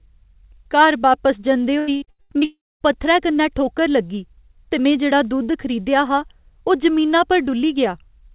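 Right after "बापस जंदे", from 1.79 to 2.45 s, the speech breaks up with repeated packet loss, giving a robotic sound. Six short gaps, the longest 83 ms, were patched by stretching the previous sound, so about half of this span is concealment. It sounds choppy and robotic. On a spectrogram, harmonics smear into repeated flat bands with hard vertical edges. The waveform shows looped, near-identical cycles between breaks.

From 2.45 to 2.83 s the signal cuts out entirely, most likely a long network dropout. The receiver first extends the last sound as a fading buzz or hiss, then falls to about 230 ms of silence before speech resumes with the lost portion simply absent. The waveform shows a decaying tail collapsing to a flat line. The spectrogram shows a fading smear, then an empty column. Throughout the clip, that spectrogram stays blank above 4 kHz, as expected from the G.711 mu-law call path.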